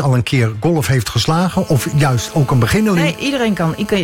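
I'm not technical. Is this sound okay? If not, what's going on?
No. From 1.53 s to 3.99 s there is GSM phone buzz: a harsh, raspy buzz that sits underneath the sound and has nothing to do with it. A 2G mobile phone close to the equipment was on a call, sending radio pulses about 217 times a second. The audio circuitry picked those pulses up and turned them into audible noise, so the buzz stays steady at that rate until it ends near 4 s.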